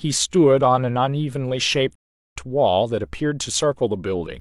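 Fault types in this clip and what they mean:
Rebuffering stall: playback runs dry at 1.95 s, dead silence fills about 0.41 s, then speech resumes seamlessly; waveform and spectrogram show a flat blank gap.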